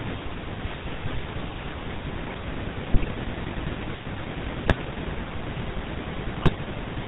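GSM full-rate codec damage runs through the whole speech clip. The sound is coded by modelling the vocal tract and exciting it with a regular pulse train that keeps only a third of the excitation samples. The result is a plainly audible buzzy, gravelly roughness over the voice, with nothing above 4 kHz. This is consistent with the original 13 kbps full-rate coder.

GSM bit errors break in three times: from 2.94 to 3.09 s, from 4.64 to 4.77 s, and from 6.36 to 6.59 s. Flipped bits reached the decoder and corrupted the filter, pitch and gain values in consecutive frames. That bends the spectrum and throws the level around, so each burst turns the speech into squawks, pops and gargling. The last burst is the longest, pointing to a run of around ten damaged frames.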